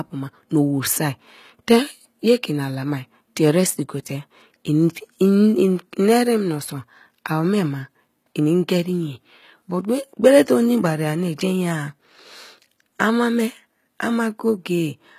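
Speech throughout shows plainly audible HE-AAC compression, likely from a low-bitrate encode that fits about 20 kbps. Copied-up treble makes the s sounds gritty and metallic rather than simply dull, unlike a plain low-pass, and nothing remains above 14.9 kHz.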